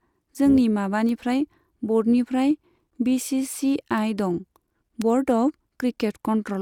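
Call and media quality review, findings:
Bit error spikes at 1.09, 3.98 and 5.02 s. Single sharp broadband ticks, unrelated to the speech. A flipped bit in memory or on a digital link makes one sample jump by a power of two and return. The spike at 5.02 s spans three consecutive samples.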